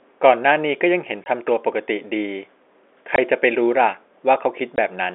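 Speech heard over a telephone-band line. It suffers packet loss filled with silence. Short holes fall at 1.25 s, 3.16 to 3.18 s and 4.76 to 4.78 s. Each gap lasts about 20 ms, which points to a single lost packet each time. The receiver replaced the missing audio with silence, so the sound cuts out abruptly with hard edges.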